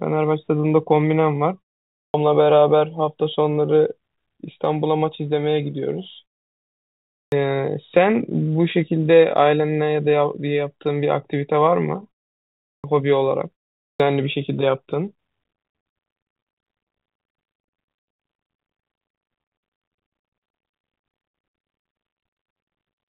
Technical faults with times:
0.00-23.09 clock drift between sender and receiver
0.14-23.07 repeated timing corrections
1.98-2.14 clipped start after a pause
7.17-7.32 clipped start after a pause
12.67-12.84 clipped start after a pause
13.83-14.00 clipped start after a pause

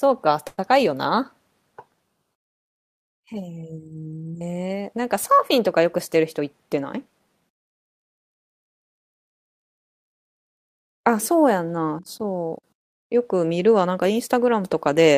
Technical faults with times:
0.47-0.60 call audio freeze
6.16-7.48 jitter buffer speed-up

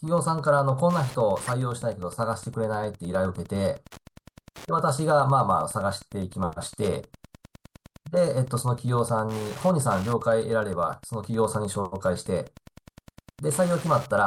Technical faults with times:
0.00-14.27 Wi-Fi interference
1.47-1.51 corrupt frame decoded

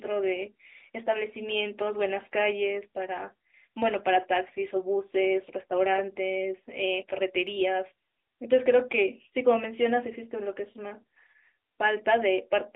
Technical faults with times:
0.00-12.76 AMR narrowband mobile codec

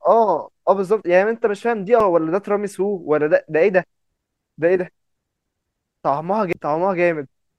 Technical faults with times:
2.00 damaged data in a compressed stream
6.53 damaged data in a compressed stream

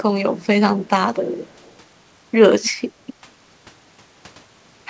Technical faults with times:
1.47-1.73 echo leak
2.65-2.69 echo leak

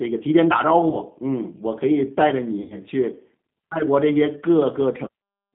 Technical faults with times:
0.00-5.55 G.729 codec
0.90-0.97 VoIP packet loss concealed by the speech codec
2.62-2.78 VoIP packet loss concealed by the speech codec

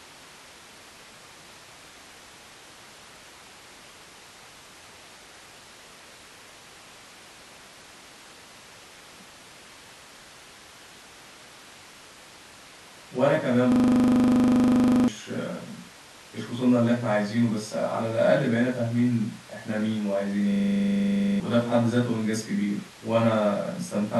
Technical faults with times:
13.72-15.08 system hang loop
20.52-21.40 system hang loop

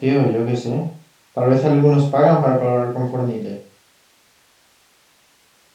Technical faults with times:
none

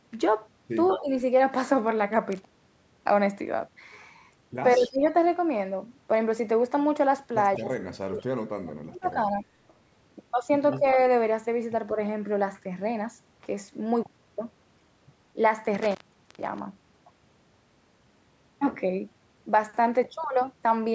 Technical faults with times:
0.88-1.00 echo leak
1.00-1.09 speech suppressed in double talk
2.32-2.87 intermittent contact
4.76-5.05 speech suppressed in double talk
4.79-4.89 echo leak
7.57-9.44 speech suppressed in double talk
10.79-10.98 speech suppressed in double talk
15.75-16.59 intermittent contact

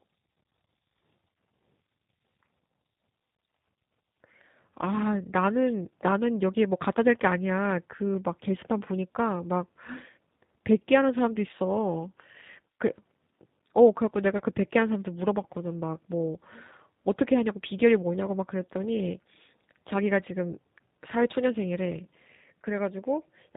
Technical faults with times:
0.00-23.56 G.729 codec
14.38-14.42 VoIP packet loss concealed by the speech codec

